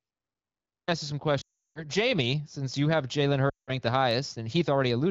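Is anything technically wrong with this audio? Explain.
Yes, the speech has two kinds of fault.

Clipped start after a pause, at 0.71 s: after about 0.7 s of silence, the output device had dropped into a sleep state and needed time to wake and lock again. About 0.17 s of sound is swallowed until 0.88 s, so "ask you some" jumps in abruptly out of silence with its opening sounds missing.

Lost AMR speech frames, from 1.41 to 1.85 s just after "ask you some", and from 3.49 to 3.76 s: radio errors corrupted speech frames, so the AMR-WB decoder repeated its last good pitch and vocal tract settings at falling gain. About 340 ms and then 180 ms are lost, which fits runs of roughly 17 and 9 frames. Each gap drops to near silence within two frames, and the voice returns briefly weak and rough. The surrounding wideband sound has the light coding character that fits a rate around 15.85 kbit/s.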